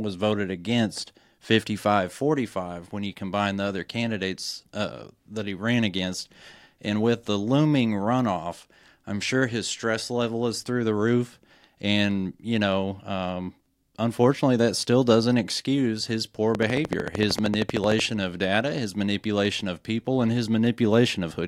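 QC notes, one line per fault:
16.55–18.01 s, train of clicks: a likely source is interference from nearby equipment or a faulty connection or power supply, injecting a near-identical pulse at a steady 13.1 per second for about 1.5 s, so about twenty clicks in all. Because the pulses repeat evenly and peak roughly 15 dB above the speech, they come across as a sharp, regular ticking laid over the talker, starting after "doesn't excuse his poor" and stopping before "of data his manipulation".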